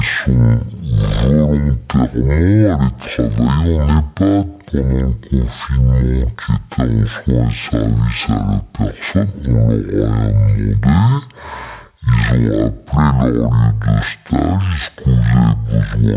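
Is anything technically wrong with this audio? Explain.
Yes. Throughout the speech there is a wrong sample rate fault. The samples are being played at half the rate they were made for, with no conversion, which fits audio recorded at 16 kHz being played back at 8 kHz. Everything runs at 0.5 times normal speed and drops a full octave, 12 semitones, so the talker sounds slow, heavy and unnaturally deep. Because speed and pitch fall together by exactly the same ratio, this differs from a pitch-shift or time-stretch fault, which changes only one of them.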